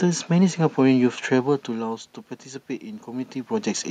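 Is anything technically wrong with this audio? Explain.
No, nothing is technically wrong.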